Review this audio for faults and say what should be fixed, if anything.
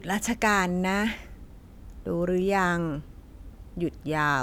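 Nothing needs fixing, as the signal shows no technical faults anywhere in the recording.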